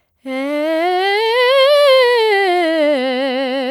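Nothing in this bit of music trips the ear as a technical fault; it just rolls along without a hitch anywhere.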